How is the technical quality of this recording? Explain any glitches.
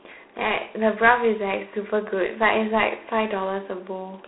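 The recording is limited by one codec fault present throughout. G.726 ADPCM coding runs the whole clip. It sends only a few bits per sample of prediction error, which fits 24 kbit/s. The speech is confined to roughly 250 Hz to 3.4 kHz, with nothing above 3.9 kHz, and carries a plainly audible harsh, rasping hiss that rises and falls with the speech level.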